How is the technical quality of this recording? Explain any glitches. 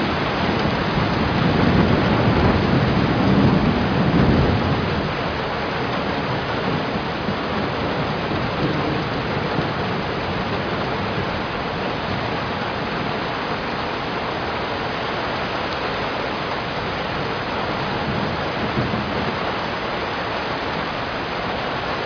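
No audible glitches or faults.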